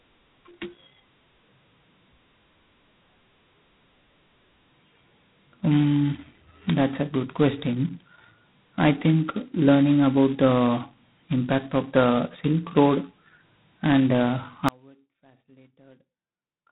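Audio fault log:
Throughout: G.726 ADPCM. The speech carries heavy coding damage consistent with G.726 at 16 kbit/s, its lowest rate. Each sample is sent as only two bits of difference from an adaptive prediction. That leaves a coarse quantisation error that tracks the signal, heard as a harsh, rasping hiss that swells on louder syllables and eases in quieter passages. The band is also closed off, with nothing above about 3.9 kHz, which gives the sound a narrow telephone quality.
14.69 s to end: Audio dropout to a faint residue. The speech cuts out abruptly and stays gone to the end of the clip. The change is a sudden break, not a pause or a fade. The gap is not dead silence but holds a faint trace of sound, roughly 35 dB below the normal level. This is likely a loss of the wanted signal somewhere upstream while the path after the break stayed live, letting only a weak leak through.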